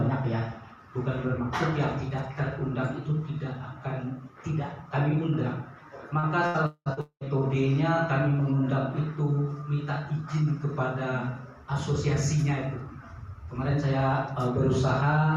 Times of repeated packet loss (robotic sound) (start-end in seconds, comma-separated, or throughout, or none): 6.19-7.29